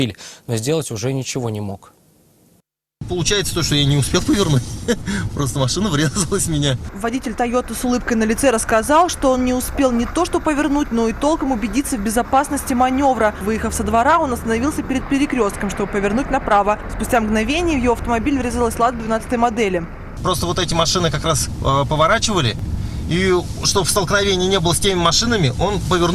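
The capture side likely fell behind at 4.19 s and again at 22.59 s, so the hardware overwrote samples before the program read them, a dropped buffer (overrun) each time. A few milliseconds of audio vanish at each point and the surrounding material is butted together with no gap of silence. What reaches the ear is a small forward jump in the sound, brief enough that nothing substantial goes missing.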